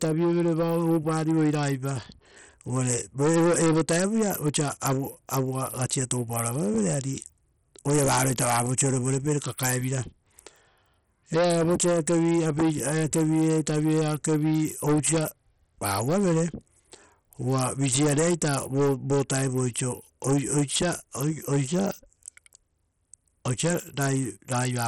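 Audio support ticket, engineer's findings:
Treble flickering and dropping out across the whole speech clip. Gritty noise and aliasing riding on the sound. Nothing above 16.3 kHz. Heavy coding damage. Likely cause: Bluetooth SBC compression. Upper sub-bands starved of bits, remaining bands coarsely quantised, no hearing model to hide the error. Damage level points to a small bit pool, around 64 kbps.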